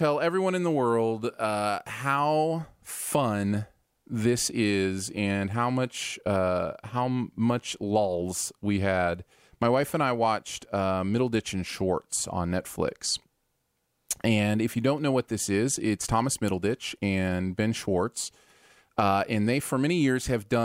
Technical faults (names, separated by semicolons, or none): none